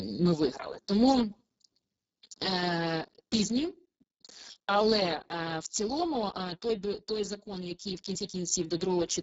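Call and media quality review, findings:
Speex codec damage throughout, whole clip. Speech hoarse, noisy, edging toward robotic. Few bits for CELP excitation, consistent with a very low bitrate near 6 kbps. Upper band thin, noise-like fill, nothing above 7.6 kHz.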